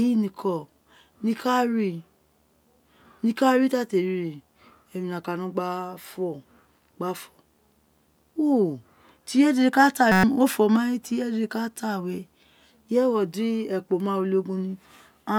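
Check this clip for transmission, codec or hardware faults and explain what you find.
Two hardware faults are present in the speech.

Video or display buzz runs throughout the clip. A screen or video cable is leaking into the audio path, putting a steady 75 Hz buzz at the picture's field rate, with hash above it, faint and roughly 45 dB below the speech.

A system hang loop occurs from 10.12 to 10.24 s. The computer or driver stalled while the sound hardware kept replaying one 5.33 ms slice of its ring buffer, which fits a 256-sample buffer. Repeated some twenty times, it becomes a 188 Hz buzz, and about a tenth of a second of speech is lost.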